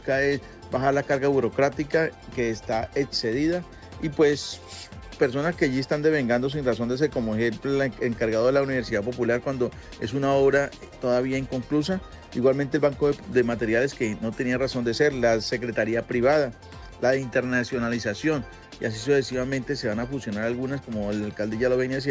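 No technical faults can be heard anywhere in this audio.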